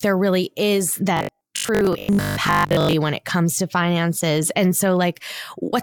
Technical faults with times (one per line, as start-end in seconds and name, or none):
1.17-2.93 robotic sound from repeated short buffers